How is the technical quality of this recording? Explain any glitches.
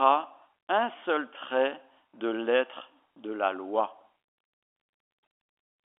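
There's one real glitch: a brief packet-loss blip, with the last packet repeated, at about 2.1 s. The audio runs over a G.711 telephone line, so it has the usual narrow phone band, roughly 300 Hz to 3.4 kHz.

At 2.10–2.13 s, right after "un seul trait" and just before "de l'être de la", about 30 ms of audio drops out, which fits a single lost packet. The receiver fills the hole by replaying the last good chunk, giving a small blip.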